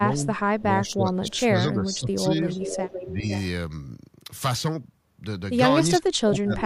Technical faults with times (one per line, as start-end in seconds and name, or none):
0.00-0.26 speech suppressed in double talk
0.62-2.49 speech suppressed in double talk
0.86-0.93 echo leak
1.30-1.40 echo leak
1.94-1.99 echo leak
2.49-3.42 echo leak
3.05-3.30 speech suppressed in double talk
5.99-6.66 speech suppressed in double talk